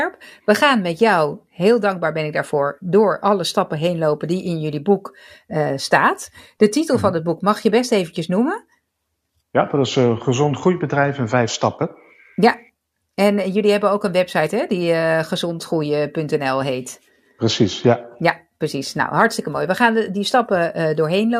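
Speech recording; no technical faults can be heard anywhere.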